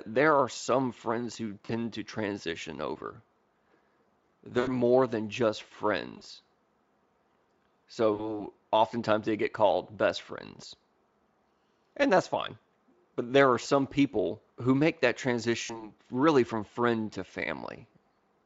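VoIP packet loss concealed by the speech codec occurs at 1.65–1.72 s after "are some friends who", at 4.59–4.74, 6.17–6.22, 8.13–8.46, 13.63–13.66 s after "there are", and at 15.63–15.93 s before "really from friend to". Each loss, 20 to 80 ms (consistent with one to four 20 ms frames), becomes a fading buzzy or noisy smear rather than silence. The speech stays weak for a moment after it resumes, which is what sets it apart from a clean dropout. The Speex coding itself adds little audible damage.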